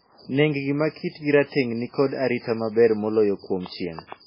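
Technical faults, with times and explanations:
throughout, MP3 compression: watery, swirly speech with nothing above 5.3 kHz, likely from heavy MP3 encoding starved of bits, which fits roughly 16 kbps.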